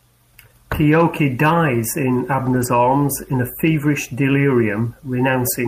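From 2.45 to 2.67 s, between "dies in" and "arms in a feverish", a lost packet rebuilt from error correction, six packets in all (120 ms), turns rougher and noisier without any gap.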